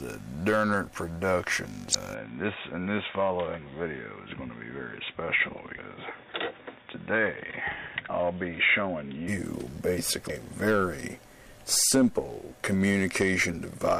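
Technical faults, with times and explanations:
1.91–1.95 s, 8.08 s and 10.26–10.30 s, damaged data in a compressed stream: each is a brief chirp or blip. Corrupted bytes make the decoder misread those frames, lose sync and jump to the next valid frame header.
2.14–9.28 s, input switched to a poorer device: with no gap, the sound turns duller and boxier, loses everything above 3.8 kHz, drops slightly in level and gains a faint new background noise. This likely comes from recording moving to a narrower-band microphone or headset profile and back.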